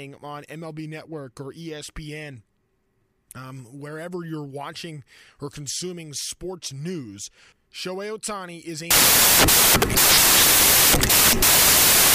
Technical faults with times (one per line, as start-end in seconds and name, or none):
8.91-12.14 samples built from the wrong bytes